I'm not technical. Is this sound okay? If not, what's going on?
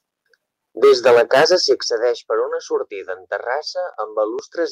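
No. Microphone overload from 0.83 to 1.72 s: the loudest parts of the speech sound harsh and crackly because the tops of the waveform are sliced off, likely because the microphone's input volume was set too high for the converter to handle.

Microphone volume stepped down at 0.84 s and again at 1.83 s, just before "per una": the speech and background suddenly get quieter, a slight dip first, then a much bigger drop, likely the call software turning the microphone down after hearing it distort.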